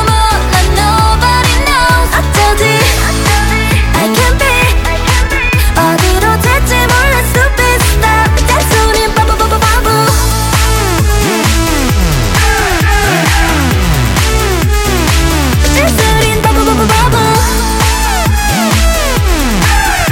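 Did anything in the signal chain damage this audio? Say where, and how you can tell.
Yes, hard clipping throughout: a converter or format stage slices peaks about 3 dB over full scale flat, squaring waveform tops and spraying high harmonics across the spectrogram.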